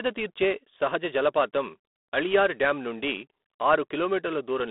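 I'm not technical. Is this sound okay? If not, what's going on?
No. For the whole clip the speech goes through G.726 ADPCM, a phone-line coding scheme that saves space by sending only rough guesses of each change. This adds a harsh, rasping hiss that rises and falls with the speech, and nothing above about 3.8 kHz survives.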